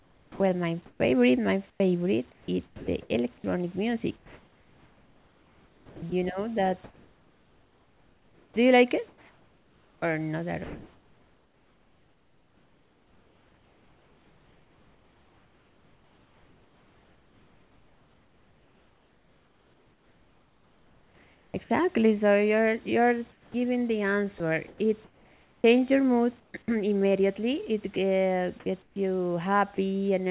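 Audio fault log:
0.00–21.54 s, 24.38–26.68 s and 27.94–28.96 s, sound chopped by the voice detector: the audio breaks up repeatedly, with quiet stretches swapped for flat synthetic hiss. About 16.6 s, 0.88 s and 0.16 s are replaced, likely by a voice detector toggling transmission and the receiver filling the gaps.
23.32–23.54 s, comfort noise in place of the background: just before "giving the", the room ambience gives way for 220 ms to a smooth, featureless hiss about 8 dB quieter, likely receiver-generated noise standing in while the sender sent nothing.
23.50–23.54 s, onset clipped by the voice detector: the sound leading into "giving the" begins abruptly, its first 40 ms missing and covered by noise, likely because the detector was slow to register that sound had resumed.
29.76–29.78 s, sound dropped by the voice detector: a 20 ms sliver of sound vanishes into steady noise, likely because the detector judged that low-level moment to be background and briefly halted transmission.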